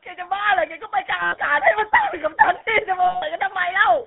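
From the start, the speech carries the buzzy, gravelly roughness of the GSM full-rate codec, plainly audible and fitting its 13 kbps rate. The codec rebuilds the voice from a vocal-tract model driven by a sparse, regularly spaced pulse train, so fine detail is lost. On a spectrogram the energy sits in a 300 Hz to 3.5 kHz band with nothing above, and the harmonics look smeared and grainy rather than clean.

From 1.22 to 1.38 s, and again from 3.04 to 3.23 s, lost GSM frames interrupt the speech. Each time, the decoder keeps repeating the parameters of the last good frame, so the sound freezes into a rough, metallic ring. The gaps last about 100 ms and 180 ms, which fits runs of 20 ms frames. A spectrogram shows flat, horizontally smeared bands, and the waveform shows a repetitive envelope.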